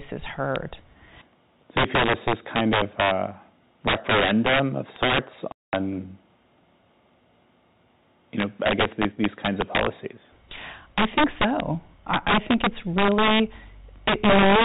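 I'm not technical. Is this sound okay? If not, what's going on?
No. Two faults stand out in this speech.

The first is integer overflow, and it runs through the whole clip. When the voice gets loud, the digital numbers carrying it run past their top limit and wrap around to the opposite extreme instead of stopping there. Each loud peak therefore jumps across to the other end of the range, which you hear as sharp, violent cracks on the loudest syllables. Ordinary clipping sounds fuzzy or flattened. These are harsher snaps, though they hit only a small share of the sound.

The second is packet loss filled with silence, at 5.52 to 5.73 s. The sound arrives in small chunks, and a run of them never made it, so the player filled about 0.21 s with nothing. The sound stops dead and restarts abruptly. A smoothed-over repair would leave a smeared or repeated fragment, but this is a clean hole in the audio.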